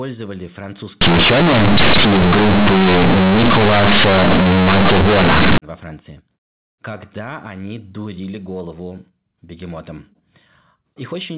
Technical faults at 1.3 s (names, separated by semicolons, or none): companded audio read as linear